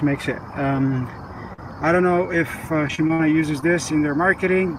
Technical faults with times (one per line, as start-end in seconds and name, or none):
1.53-1.60 short concealed packet loss
2.88-3.21 repeated packet loss (robotic sound)
3.61-3.64 short concealed packet loss